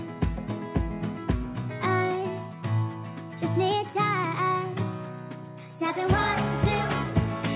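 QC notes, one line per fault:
No faults found: the audio carries the band limit of a call path, with nothing above 4 kHz, consistent with G.711 mu-law at 64 kbps.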